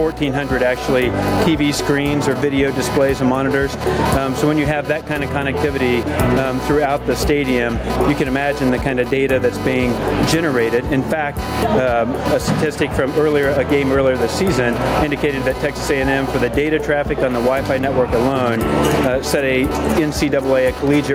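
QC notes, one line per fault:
throughout, computer activity noise: a buzzing, chirping pulse repeating around 300 times a second sits roughly 20 dB below the sound. It rises and falls with processor or mouse load moving the shared ground, not with the audio, which separates it from steady mains hum.
throughout, gain pumping: the level swings by around 10 dB, leaving loud and soft parts squashed together. The likely cause is input gain set far too high, with a fast limiter or compressor pulling it back. Unlike noise, the swings follow the sound's own loudness.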